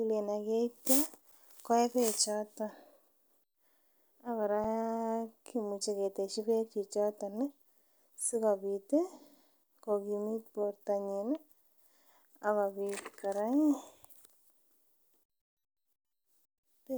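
Two brief underruns with held sample show up in the speech here. At 1.32 s, just before "koyee bekbchoton", the output buffer runs dry for about 8 ms and the converter simply holds its last value, so the waveform sits flat and the sound stops without a click. Roughly 7 ms of live audio went missing during the gap. The same thing happens at 4.64 s, only 2.67 ms this time, a gap of 128 samples, with roughly 3 ms of audio lost.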